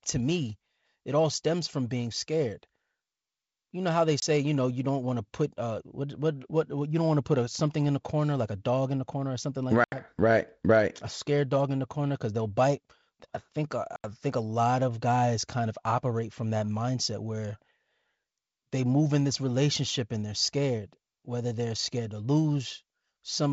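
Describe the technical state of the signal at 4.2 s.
A block of digital silence runs from 4.2 to 4.22 s, right after "know how they" and before "you know you don't". For 20 ms the samples drop to silence, which suggests an output buffer not filled in time. The hard cut in and out leaves a brief hole. On the waveform it is a flat line. On the spectrogram it is a narrow blank column.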